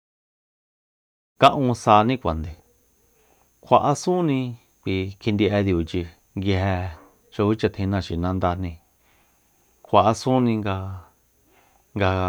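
No faults are audible in this speech recording, and the level rises gradually at the start, as an editor's fade-in would, without any click or hard edge.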